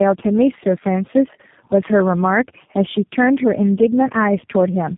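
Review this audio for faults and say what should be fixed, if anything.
Tandem speech coding is audible throughout. The speech sounds rough, muffled and warbly, with nothing above about 3.7 kHz. It points to three low-rate speech codecs in series, each re-coding the previous one's errors. Prevent it by keeping one codec end to end.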